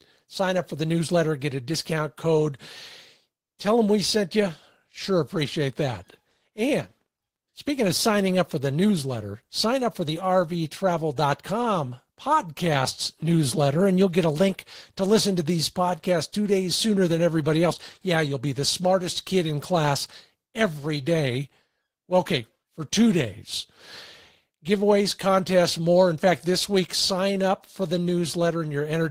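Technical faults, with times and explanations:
Nothing here needs flagging; I listened through the speech and there's no technical fault to point to at any moment.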